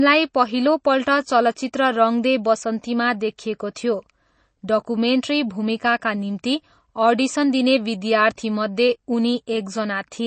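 Watery, swirling speech with dulled sibilants runs through the whole recording, and nothing is left above about 8.3 kHz. That points to MP3 compression, likely at a low bitrate around 32 kbps: the encoder drops the treble at a fixed cut-off and lets weak frequency lines flicker between frames. Two sharp onsets, at 3.38 s and 3.75 s, are preceded by a short hiss lasting about 10 ms and 13 ms and sound smeared. This is pre-echo, where the codec spreads quantisation noise across a block so it leaks into the quiet moment before each attack.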